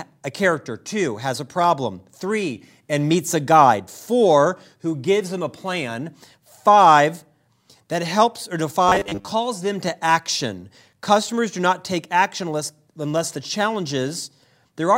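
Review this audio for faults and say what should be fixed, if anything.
Between 8.89 and 9.28 s the speech turns into robotic sound from repeated short buffers. For about 0.4 s there's a rigid, metallic buzz at 100 Hz that loosely tracks the original. That rate points to a 10 ms chunk being replayed. The likely cause is fresh audio not arriving in time, so the playback side kept looping its last short block, with most of that stretch repeated rather than new. To prevent it, give the audio path more buffering headroom so underruns don't force repeats.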